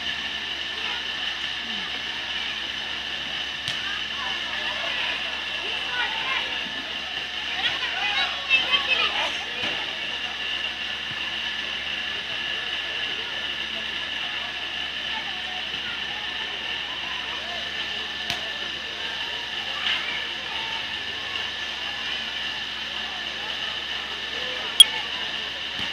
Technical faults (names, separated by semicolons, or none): damaged data in a compressed stream